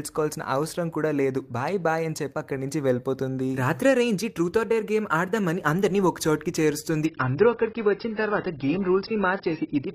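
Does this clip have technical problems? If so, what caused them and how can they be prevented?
Yes. From 7.06 s to the end, the sound abruptly loses its treble, with nothing above about 5.6 kHz. Artefacts rise, with no gap. This is an adaptive stream at a lower bitrate. It fits a switch from about 96 to 16 kbit/s. Steadier bandwidth or larger buffering prevents it.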